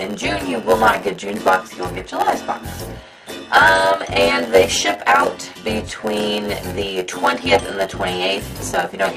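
A block size mismatch (padded) runs through the whole clip, from start to finish. One stage hands over blocks about 8 percent shorter than the next stage expects, and the missing tail of each block is filled with silence. Those regular gaps produce a steady buzz at 91.9 Hz, one dropout roughly every 10.9 ms. The stretched-out blocks also make the sound play at 0.919 times its proper speed while keeping close to its normal pitch.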